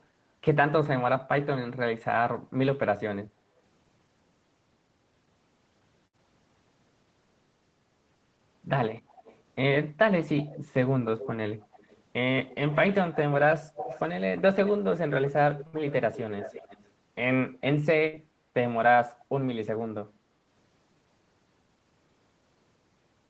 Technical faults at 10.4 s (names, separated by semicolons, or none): echo leak